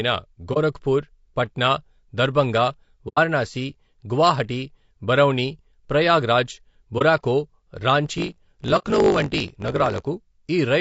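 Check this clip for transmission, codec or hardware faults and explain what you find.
Yes, there are three kinds of fault: codec damage throughout, four short dropouts, and a buzzing, sped-up stretch near the end.

Low-delay AAC compression, throughout: the whole clip sounds rough and grainy, with noise filling the gaps between the voice's harmonics and a thin, artificial-sounding top band. This is likely AAC-ELD at a low bitrate, around 32 kbps.

AAC frame loss with muting, at 0.53–0.58 s, at 3.08–3.18 s just after "పట్నా దర్బంగ", at 6.98–7.02 s just after "గువాహటి బరౌణి ప్రయాగ్రాజ్", and at 8.78–8.83 s. The lost audio was replaced with silence, and overlapping windows fade the sound out and back in. The gaps last 30, 90, 30 and 60 ms respectively: the single lost frames are brief dips and the longer runs are soft-edged holes.

Block size mismatch (truncated), 8.04–10.01 s: one stage writes longer blocks than the next reads, so the tail of each block is discarded. 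This fits 1024-sample blocks being cut short. It produces a 50 Hz buzz at the block rate, and the audio runs 1.07 times fast at roughly normal pitch.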